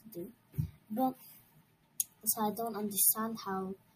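No technical faults are audible anywhere in the clip.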